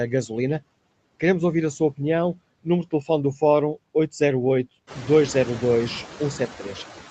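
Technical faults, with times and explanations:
throughout, noise suppressor artifacts: the suppressor pulls steady-noise bands down by about 20 dB frame by frame, so background noise sinks between phrases and swells under speech.
1.23 s, lost packet rebuilt from error correction: a single lost packet was replaced by the low-bitrate copy carried in the next one, so 20 ms just before "ouvir a sua opinião" turns briefly rougher and noisier, without any gap.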